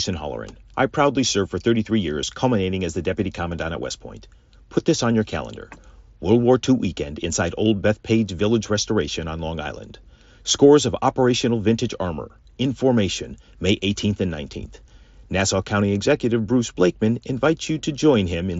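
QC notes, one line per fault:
No faults were heard in this speech clip. It carries the sound of a Bluetooth mSBC headset codec, with speech band-limited to about 8 kHz and the light grain that path leaves on louder passages.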